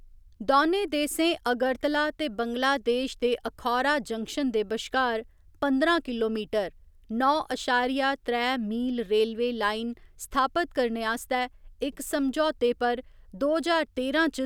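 No technical faults are audible.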